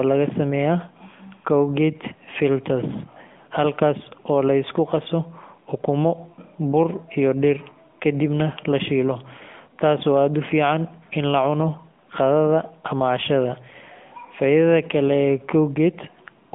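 From start to finish the speech sounds thin, boxed-in and plainly buzzy, with a synthetic, gritty edge: the telltale AMR narrowband mobile codec. Nothing reaches above about 3.7 kHz, and the low end stops near 150 Hz, giving a phone-line band of roughly 150 Hz to 3.5 kHz. The codec rebuilds the voice from a vocal-tract model excited by sparse pulses in short subframes, and the plainly audible roughness fits a mid-rate mode around 10.2 kbps.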